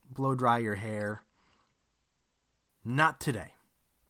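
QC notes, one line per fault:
1.12–2.77 s, call bitrate drop: the sound turns rough and muffled for about 1.6 s, which fits the encoder falling from around 32 to 13 kbps. The spectrogram shows content above 8 kHz vanishing as a flat ceiling, then returning toward 20 kHz.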